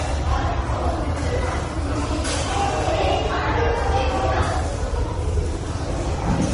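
A raspy mains buzz sits under the sound the whole way through: switching spikes riding on 60 Hz, stacking harmonics up high, roughly 30 dB below the signal. Everything stops dead at 10.6 kHz, with layered, smeary artefacts throughout, likely transcoding between lossy codecs, something like low-bitrate MP3 passed through Vorbis and back to MP3.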